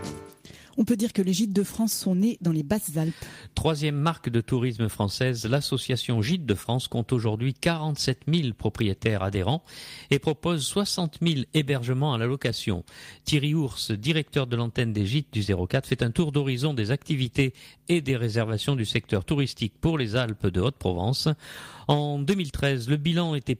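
No technical faults can be heard anywhere in this audio.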